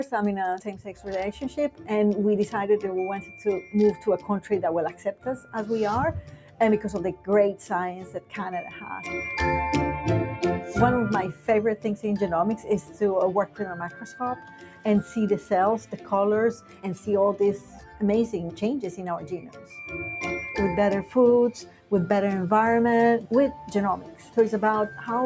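A noise suppressor designed for speech stays active across the whole clip and treats this sound as something to remove. Sustained tones, ambience and decaying tails get pulled down while sharp onsets pass, so the level swings by roughly 10 dB and the sound pumps and thins instead of holding steady. The band-limiting from the call's microphone processing, with nothing above 8 kHz, sits underneath this.

The clearest cases of sound cut by the noise suppressor fall in five stretches. From 0.05 to 1.9 s, about a second of held material sinks by up to about 10 dB. From 3.21 to 8.81 s, roughly two seconds in total drop by up to about 11 dB. From 11.33 to 19.72 s, around three seconds are pulled down by up to about 10 dB. Shorter dips follow at 21.04 to 21.92 s (about 11 dB) and 23.21 to 24.37 s (about 10 dB).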